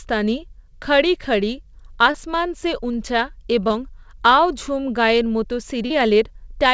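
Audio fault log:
2.12–2.16 s, 3.68–3.72 s and 5.86–5.92 s: short concealed packet loss. About 20, 20 and 40 ms went missing. The first is just before "সে উঞ্চা’", the second just after "সে উঞ্চা’", and the third just after "ঝুম গায়ে’এর মতো". The receiver stretched the preceding sound over each hole and blended back, giving a brief smear rather than the silent gap or hard click of an unconcealed dropout.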